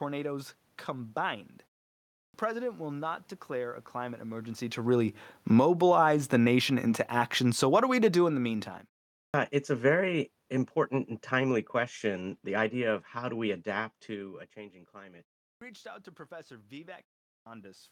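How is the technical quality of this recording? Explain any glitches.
There's one recurring glitch, a clipped start after a pause, at 2.18, 9.19, 15.47 and 17.3 s. The output device dozes during short gaps of 0.3 to 0.6 s, and waking it swallows the first 140 to 160 ms of each phrase, so lines like "president will not declare" snap in abruptly, missing their opening sounds.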